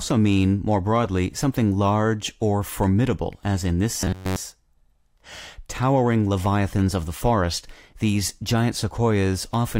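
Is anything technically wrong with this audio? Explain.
Yes. Robotic sound from repeated short buffers appears from 3.98 to 4.36 s. The likely cause is fresh audio arriving too slowly, so playback loops the most recent fragment of roughly 10.7 ms while the real signal is dropped. Across about 70 percent of that stretch, the looping imposes a steady buzz at 93.8 Hz, the inverse of that fragment length. The speech becomes a stiff, metallic drone that only loosely tracks the original syllables.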